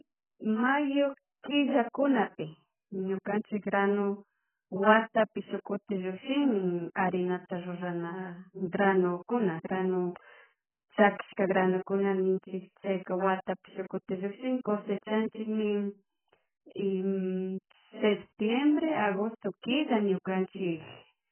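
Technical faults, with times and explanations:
Throughout: AAC compression. The speech sounds dull and smeared, with nothing above 3.1 kHz. Damage is heavy, with a warbling, fizzy texture on sibilants. This is likely AAC-LC at a very low bitrate, fitting roughly 9 kbps, quantising coarsely and cutting the top band.
8.72 s: pre-echo. A brief hiss of about 16 ms precedes a sharp attack, which sounds soft and smeared. The codec spreads its quantisation noise across the whole block, so noise meant for the loud attack also fills the quiet moment before it.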